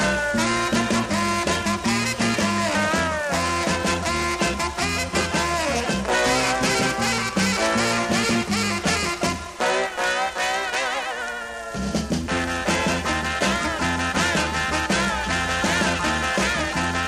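Listening through the recording, nothing stood out as a technical problem at any point.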